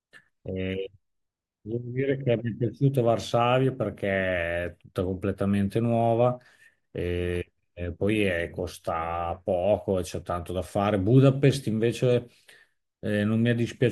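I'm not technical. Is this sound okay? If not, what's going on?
Yes, nothing in this speech recording points to a technical fault, so there's nothing here to fix.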